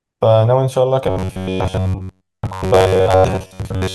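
From 1.04 s to the end, the speech turns into a robotic sound from repeated short buffers. It is a rigid, metallic buzz near 94 Hz. Most of the audio is likely replaced by repeats of a roughly 11 ms buffer.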